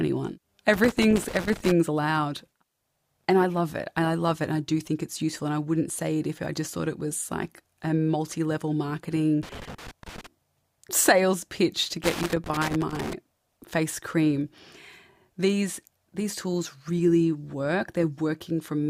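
At 0.74 to 1.72 s, 9.43 to 10.27 s, and 12.04 to 13.13 s (between "sales pitch to" and "face cream"), the speech breaks into loose connector crackle: a worn contact opening and closing, chopping the signal. The bursts are irregular, scratchy and lasting about a second, unlike the clean, evenly shaped gaps of digital dropouts or the steady hiss of background noise.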